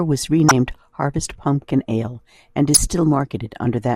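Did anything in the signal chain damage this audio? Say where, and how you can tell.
Yes, at the codec. A corrupt frame decoded twice, at 0.49–0.51 s and 2.74–2.77 s: each time a couple of damaged frames played anyway, misread codes throwing loud energy to wrong frequencies. The spectrogram shows short stray smears unrelated to the speech, and the waveform shows abrupt spikes.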